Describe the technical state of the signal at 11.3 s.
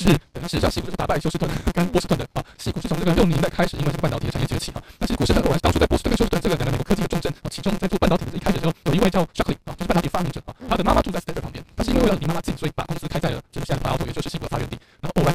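At 11.3 s the speech carries a block size mismatch (truncated), present throughout the clip: each block is written longer than the next stage reads, which fits a 256-sample read, and its tail is discarded. This gives a 172 Hz buzz and speech running 1.88 times fast at roughly normal pitch.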